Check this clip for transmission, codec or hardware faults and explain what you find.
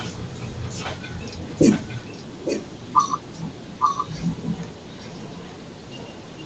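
There's one real problem here, an echo leak running the whole way through, from 0.0 to 6.46 s. A delayed copy of the speech trails the original by about 0.86 s, sitting roughly 10 dB down. That's likely a far-end loudspeaker whose echo canceller let some of the mic pickup slip back into the call. The audio topping out around 8 kHz is just the call path's normal bandwidth.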